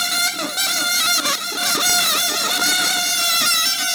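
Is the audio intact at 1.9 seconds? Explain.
No, there's a single sharp snap at about 1.90 s, an electrical switching spike lasting only a couple of milliseconds and peaking around -10 dBFS. It's a crisp click laid on top of the audio rather than a gap or dropout. The likely cause is a nearby switch, motor or static discharge arcing briefly, with the audio line picking up that burst of interference.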